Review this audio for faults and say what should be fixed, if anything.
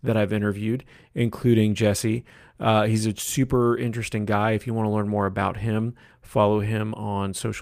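No faults heard; nothing to fix.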